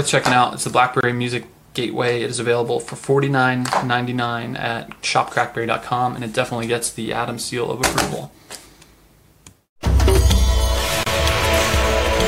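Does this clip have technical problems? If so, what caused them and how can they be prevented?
Yes. Separately encoded pieces were joined without trimming each encoder's start delay and final-frame padding, leaving a gap at a join of encoded pieces. About 25 ms of silence cuts into the sound at 1.01 to 1.03 s, and 31 ms at 11.03 to 11.06 s, ten seconds apart. Trim the encoder delay and padding before joining, or encode the material in one continuous pass.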